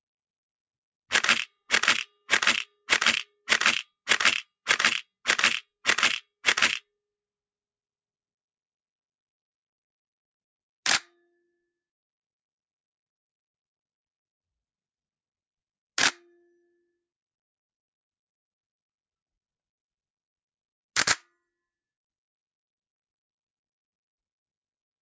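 No faults present; the audio shows ordinary call microphone processing, with the lowest bass trimmed by its high-pass filter and nothing above 8 kHz.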